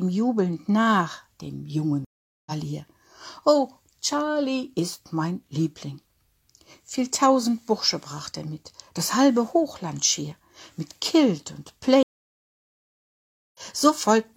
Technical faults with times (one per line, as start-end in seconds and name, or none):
2.05-2.52 stream reconnect
12.03-13.59 stream reconnect